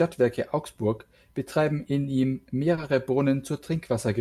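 Right after "betreiben in ihm", from 2.75 to 2.79 s, there's a short concealed packet loss. About 20 ms of audio didn't arrive in time, so the receiver stretched the preceding sound to cover the gap and then blended back, leaving a quick smeared wobble.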